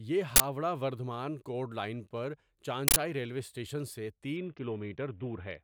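At 0.36 to 0.40 s, and again at 2.88 to 2.96 s between "لائن پر" and "ریلوے اسٹیشن سے", an uninitialised buffer bursts out. Blocks of 40 ms and 80 ms played before speech was written into them. Leftover memory became harsh, loud digital noise.

From 4.37 s, right after "ریلوے اسٹیشن سے", to the end of the clip, there is a Bluetooth SBC bit pool drop. The speech turns dull and gritty. The link cut its coding budget, starving the upper sub-bands and coarsening the rest. The sound fits a bit pool falling from 28 to 6, near 60 kbps.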